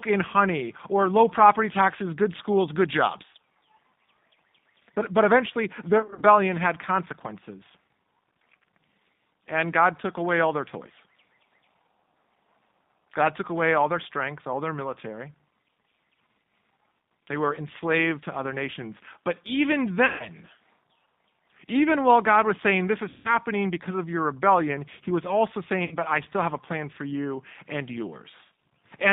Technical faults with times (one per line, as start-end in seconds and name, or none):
0.00-29.13 G.729 codec
5.98-6.23 VoIP packet loss concealed by the speech codec
20.06-20.29 VoIP packet loss concealed by the speech codec
23.09-23.29 VoIP packet loss concealed by the speech codec
25.85-25.94 VoIP packet loss concealed by the speech codec